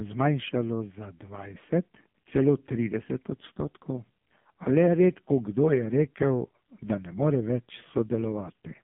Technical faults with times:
0.00-8.84 AMR narrowband mobile codec

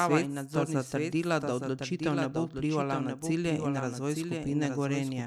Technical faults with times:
0.00-5.26 doubled audio track

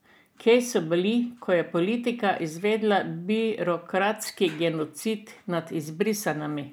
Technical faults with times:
none

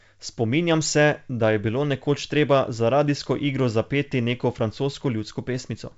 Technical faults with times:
none

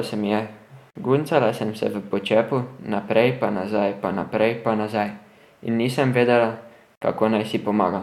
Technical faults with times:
0.90-0.95 gap at a join of encoded pieces
6.95-7.01 gap at a join of encoded pieces

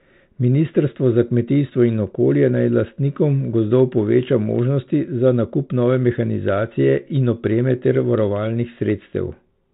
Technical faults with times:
none

